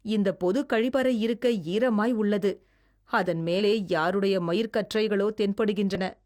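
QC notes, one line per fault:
0.88–0.92 s, 3.56–3.61 s and 5.95 s: damaged data in a compressed stream. Each is a brief glitch that breaks the speech, the first two lasting roughly 45 to 50 ms and the last only a blip. Corrupted bytes in the encoded stream made the decoder misread those frames and lose sync, so the sound broke up while it hunted for the next valid frame header.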